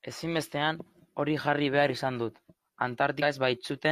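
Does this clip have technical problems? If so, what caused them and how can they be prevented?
Yes. At 3.18 to 3.23 s the speech jumps ahead: compressed frames skipped, roughly two 42.7 ms frames dropped. Verify file integrity and decoder error handling.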